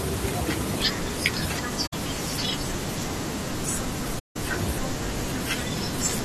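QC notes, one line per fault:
1.86–1.94 s and 4.18–4.37 s, AAC frame loss with muting: the speech drops out for about 64 ms and then about 171 ms. That fits three and eight lost frames of roughly 21 ms each. The decoder zeroes the missing spectrum, and the overlapping transform windows ramp the sound down and back up across about a frame. The result is a soft-edged silence, unlike a hard sample dropout, which cuts abruptly.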